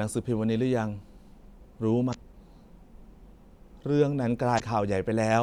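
At 2.10 s and again at 4.56 s you get a brief glitch, each lasting around 40 ms, in this speech clip. That's damaged data in a compressed stream. Some bytes in the file are wrong there, so the decoder can't make sense of those frames. It loses its place and hunts for the next valid frame header. What comes out in the meantime is that short glitch instead of clean audio.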